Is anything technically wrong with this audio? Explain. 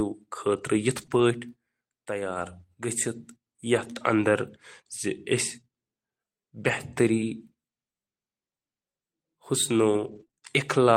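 Yes, there are three kinds of packet-loss damage in this speech.

Lost packet rebuilt from error correction, at 0.97 to 1.03 s, 1.09 to 1.23 s, 3.75 to 3.85 s and 6.63 to 6.73 s: the speech stays continuous, but these stretches turn briefly rougher and grainier. Packets never arrived, and the packet following each one carried a low-bitrate backup copy that the decoder played instead. The patched spans run about 40 to 80 ms, which fits two to four 20 ms frames each.

Short concealed packet loss, at 1.05 to 1.09 s: right between the first two rebuilt patches there is a quick smear or wobble. About 20 ms of audio arrived too late to use and had no backup copy. The receiver invented roughly 21 ms by carrying the preceding sound forward, then faded back into real audio.

Repeated packet loss (robotic sound), from 9.95 to 10.43 s: the speech goes choppy, with pieces missing. Five separate holes, the longest about 23 ms, each got patched by extending the last sound. 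About a fifth of that half-second is invented, and the holes come close together, each following soon after the last patch.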